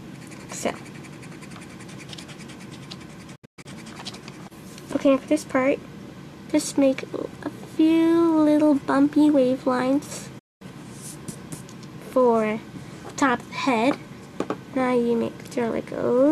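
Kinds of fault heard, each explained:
digital broadcast dropout: the sound fades out within 8 ms and falls silent twice, at 3.35 to 3.66 s in several short holes totalling 216 ms, and at 10.39 to 10.62 s; the receiver muted over lost or corrupt frames, so that audio is gone.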